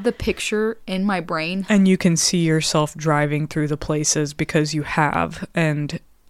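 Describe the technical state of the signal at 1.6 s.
At 1.6 s the speech signal is intact, with no dropout, clipping, glitch or other technical fault.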